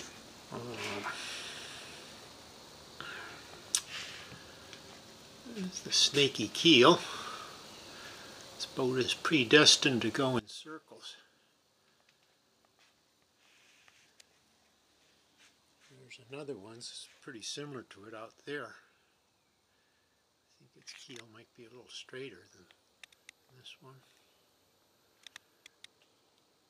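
At 10.39 s the level drops by about 21 dB and stays down right to the end. What's left is a much quieter residue of the sound, background included. That's most likely one channel inverted: one side of a stereo pair had its polarity flipped, so when the two got summed to mono, everything they shared cancelled out. Only the small difference between the channels survives, which is why the second half sounds so sunk.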